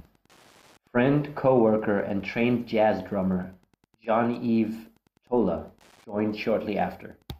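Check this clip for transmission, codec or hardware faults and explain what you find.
A faint, steady ticking runs under the speech for the whole clip, roughly ten clicks a second and about 40 dB below the talker. This is Wi-Fi interference: a nearby Wi-Fi radio's beacon, sent every 102.4 ms, is picked up and rectified by the audio circuitry, so each transmission becomes a click.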